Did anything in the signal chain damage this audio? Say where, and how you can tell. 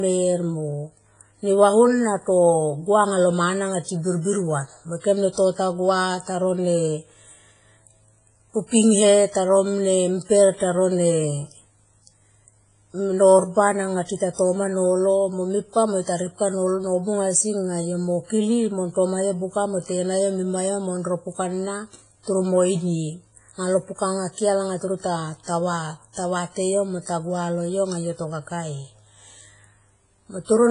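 Yes, at the codec stage, and for the whole of the speech. Nothing survives above 10.3 kHz, and the sound is smeared, ringing and washy, with a hiss that swells and falls with the speech. This is likely WMA compression, which fits a bitrate of about 24 kbps, with long transform blocks spreading quantisation noise and zeroing weak components. A plain low-pass filter would cut the top cleanly without the pumping hiss and ringing.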